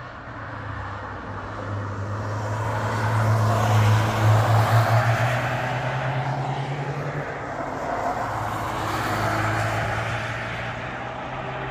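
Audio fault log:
No technical faults can be heard anywhere in the signal, from its opening moment to its close.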